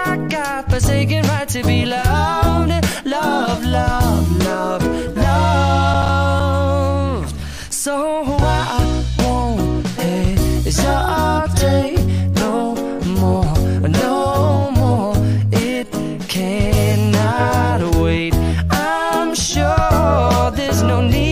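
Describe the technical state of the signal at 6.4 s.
At 6.4 s the signal is just leaving a stretch of processor overload crackle that runs from about 5.94 to 6.40 s. The processor falls behind and misses several deadlines for its short buffers, which are probably around 5 ms each. Each missed buffer plays as silence with abrupt edges, and together they are heard as a gritty, tearing crackle over the sound. On the waveform these show up as brief flat dropouts cutting sharply in and out. On a spectrogram they appear as thin vertical broadband streaks.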